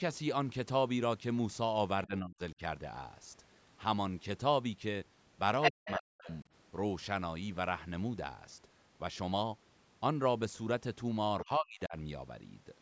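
From 2.07 to 2.4 s, speech suppressed in double talk cuts the talker by up to about 35 dB, likely because the echo canceller mistook both voices for echo. The waveform shows an abrupt hollow, and the spectrogram shows near-empty columns. From 5.62 to 5.99 s, the other side's voice leaking through sits slightly louder than the talker, likely as residual loudspeaker echo. It appears as a second set of harmonic lines. Overlapping it, from 5.71 to 6.29 s, the talker is suppressed by up to about 40 dB. The faint leak returns from 6.29 to 6.38 s, well below speech level. From 11.44 to 11.95 s, another suppression of up to about 40 dB leaves a sharp gap in the envelope.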